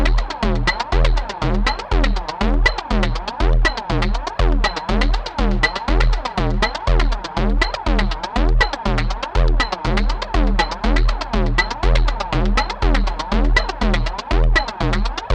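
No technical faults can be heard anywhere in this recording of sounds.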